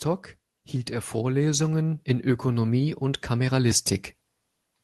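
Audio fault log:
0.88–3.89 s, automatic gain rising: speech and background swell together by about 6 dB, as the gain control, finding the input too quiet, slowly raises its gain.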